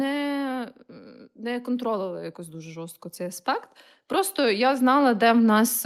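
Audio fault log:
0.05–0.72 s, automatic gain falling: speech and background sink together by about 3 dB as gain control trims a too-loud input, unlike a talker simply quietening.
1.35 s to the end, automatic gain rising: gain control lifts a too-quiet input, so speech and background swell together gradually, unlike a talker projecting louder over steady background.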